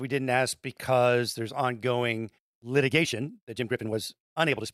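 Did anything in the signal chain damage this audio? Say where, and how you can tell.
Yes. From 2.86 s, right after "ask because there's ongoing", to the end, there is a time-stretched section. The pace jumps to about 1.59 times faster while pitch holds, sounding rushed. Pitch-preserving software likely dropped short pieces at the editing or storage stage.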